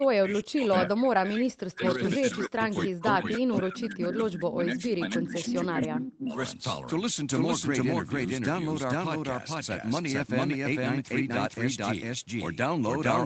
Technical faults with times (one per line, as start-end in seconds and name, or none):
0.00-13.25 doubled audio track
0.00-6.36 speech suppressed in double talk
6.13-6.17 echo leak